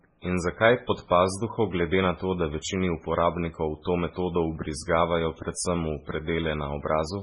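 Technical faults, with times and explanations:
Throughout, MP3 compression: the speech sounds watery and swirly, with a hard ceiling at 10.5 kHz and nothing above it. This is likely heavy MP3 coding at a very low bitrate, consistent with about 16 kbps. Short of bits, the encoder removes the treble at a fixed cut-off and drops weaker frequency components that flicker in and out between frames, which causes the swirling texture.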